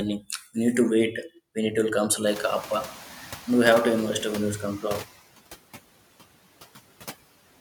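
Noise suppressor artifacts run through the whole of this speech recording. The suppressor estimates the steady background frame by frame and pulls down each band it judges to be noise, by about 17 dB here. The noise drops away in the pauses and swells back under the talking. The noise suppressor is catching up from 2.26 to 4.52 s. Around two and a half seconds in, the room noise jumps by about 22 dB and then sits about 18 dB below the speech. The suppressor's estimate still reflects the quieter room, so at first it cuts the louder noise by only about 6 dB and the background pushes through. Over roughly 2.26 s the estimate adapts, and the noise sinks back toward the deeper reduction.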